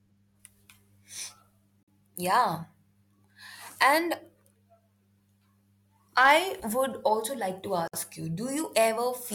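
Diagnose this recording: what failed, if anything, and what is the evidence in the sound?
Codec stage, gap at a join of encoded pieces: the speech drops out for about 47 ms at 1.83 s and about 59 ms at 7.88 s, six seconds apart, then resumes exactly where it stopped. Separately encoded segments were concatenated with their encoder delay and end-frame padding left untrimmed.

Level stage, hard clipping: from 6.18 to 6.35 s the peaks are cut flat, driven about 3 dB past the ceiling of a converter or number format. The squared-off tops add high harmonics, heard as crackle on the loudest parts of the speech.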